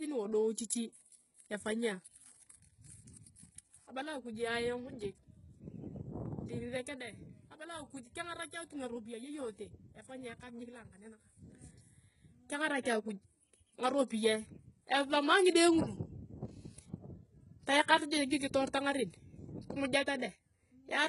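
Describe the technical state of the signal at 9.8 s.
At 9.8 s you're hearing the same heavy HE-AAC compression damage that runs through the whole clip. The treble is likely rebuilt by band replication rather than coded, so sibilants sound gritty and metallic, nothing survives above about 11.1 kHz, and it suggests something near 12 kbps.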